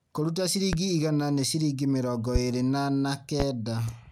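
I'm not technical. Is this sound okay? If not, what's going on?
No. There are three loud pops, at 0.73–0.77 s (just before "igana nĩ ciringi mĩrongo"), 2.35–2.39 s (just before "ĩrĩ na na") and 3.40–3.44 s (after "mĩrongo ĩrĩ na na"). Each is a single sharp thump, much louder than the speech, likely from a sudden electrical jolt such as static or a switch. Unlike a dropout, the speech keeps going underneath instead of cutting out.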